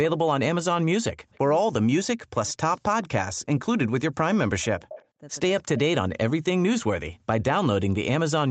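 At 1.30 s a faint, delayed copy of the speech appears, trailing by 183 ms and about 35 dB below it. This is an echo leak, likely from a far-end loudspeaker whose echo canceller let residue pass back. It returns from 2.76 to 3.07 s at about 30 dB down, and from 4.89 to 5.06 s, much stronger at about 15 dB down. Unlike the dropouts, it adds a second, lagging voice rather than removing anything.

Speech suppressed in double talk interrupts the talker from 1.64 to 3.42 s, 3.98 to 4.93 s, 5.63 to 7.28 s and 7.68 to 7.94 s. The voice plunges by up to roughly 40 dB, likely because the canceller treated overlapping talk as echo. The talker's own speech cuts out in chunks, with no extra copy.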